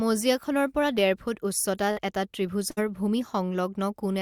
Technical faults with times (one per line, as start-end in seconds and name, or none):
1.91-1.99 burst of packet loss
2.71-2.79 burst of packet loss